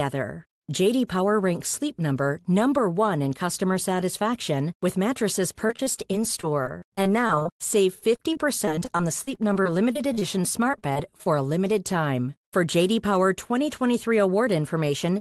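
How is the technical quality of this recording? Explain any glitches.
The recording is marred by repeated packet loss (robotic sound) in two stretches of the speech. The sound passes through a call-style codec path, which limits the top end to about 12 kHz.

The first stretch runs from 5.67 to 10.23 s. Dozens of short holes appear, the longest about 42 ms. A second burst follows from 10.71 to 11.27 s, with a handful of holes up to 23 ms. Data arrives late or not at all. The receiver patches each hole by stretching the last sound it had. About a seventh of the first stretch is patched this way, and nearly a fifth of the second. The speech turns choppy, with small pieces missing.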